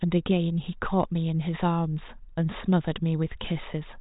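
Nothing here stands out as a fault: the speech comes over the G.726 ADPCM link at 40 kbit/s, with the band topping out around 3.8 kHz as that telephone coding does.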